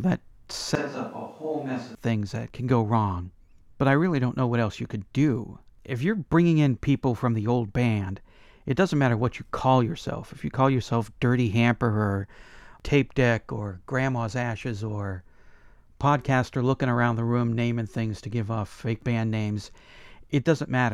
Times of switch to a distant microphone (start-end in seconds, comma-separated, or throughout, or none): 0.75-1.95